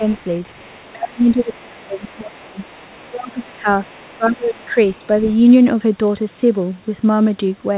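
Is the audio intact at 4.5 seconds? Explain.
No. At 4.5 seconds the speech is caught in speech suppressed in double talk, which runs from 2.99 to 4.76 s. The talker's level sinks by roughly 25 dB at its deepest, and the dips add up to about a second and a half. It sounds like the speech ducking and breaking into pieces. The likely cause is an echo canceller that heard both sides at once. It could not tell the talker from the loudspeaker echo, so it turned everything down.

The same moment also carries the other side's voice leaking through, from 3.84 to 5.33 s. A second, faint voice sits under the talker, around 30 dB below the speech. It comes through as a residue. This is likely loudspeaker playback of the far end reaching the microphone, with the echo canceller leaving part of it behind. Here it overlaps the suppression, so the weakened speech and the leaked voice are heard together.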